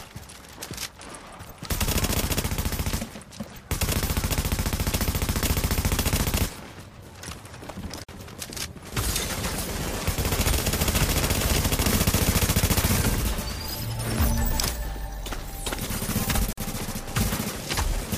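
Gap at a join of encoded pieces, at 8.04 s and 16.53 s: the sound drops into silence for about 48 ms and 47 ms, then resumes where it stopped. Separately encoded pieces were joined untrimmed, so encoder start delay and final-frame padding remain, smeared at the edges.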